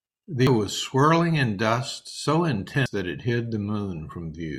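At 0.47 s the speech lurches forward, as if roughly 400 ms of talking vanished, and at 2.86 s the same happens again with about 300 ms gone. These are compressed frames skipped. Around five whole frames, then about three, of roughly 85 ms each were never played. The audio jumps ahead by that many frames.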